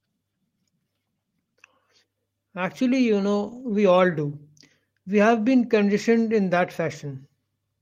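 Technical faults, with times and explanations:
3.43–3.61 s, lost packet rebuilt from error correction: just before "we all do", the speech turns briefly rougher and grainier without ever dropping out, so there is no silence or click. About 100 ms of audio was lost in transit, which fits five separate 20 ms packets, and each following packet carried a low-bitrate backup copy that the decoder played in its place. Those coarser copies keep the sound continuous but audibly degrade its detail.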